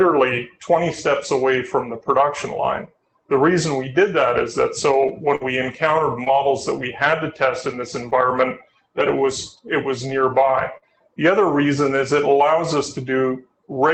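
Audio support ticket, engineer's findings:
Scattered short gaps, 4.91 to 10.84 s: about four tiny dropouts, none over roughly 50 ms, about 120 ms lost in all. Jitter buffer stretched the preceding sound over each, hence quick ticks and smears. Call-path band limit near 8 kHz, consistent with Opus around 24 kbps.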